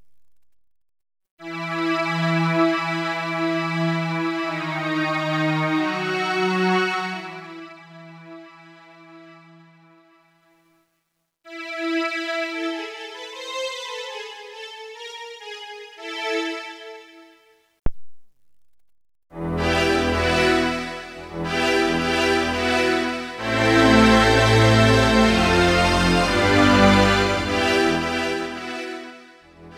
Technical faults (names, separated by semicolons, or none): zipper noise